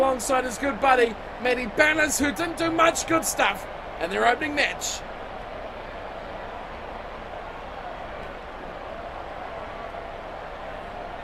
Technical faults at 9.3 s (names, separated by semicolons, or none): overlap-add ripple